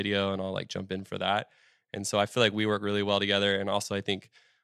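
Speech recording with no technical faults detected anywhere in the clip.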